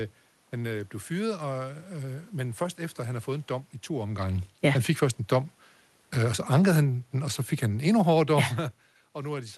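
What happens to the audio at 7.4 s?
At 7.4 s the automatic gain is falling: from 6.19 to 8.67 s the control eases its gain down by about 4 dB, so the room background sinks along with the speech, unlike a talker moving away.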